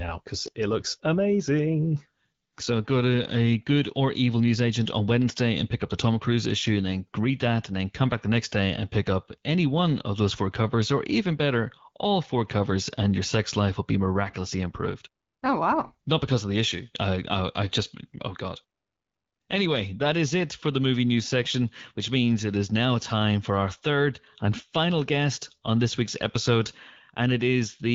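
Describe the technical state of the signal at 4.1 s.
At 4.1 s the signal is intact, with the speech carried cleanly through the AMR wideband (HD Voice) codec at 12.65 kbit/s.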